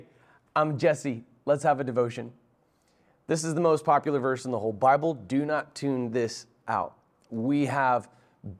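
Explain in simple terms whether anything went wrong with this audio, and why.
Nothing went wrong here: the speech is continuous, with no dropouts, glitches, distortion or other faults anywhere in the recording.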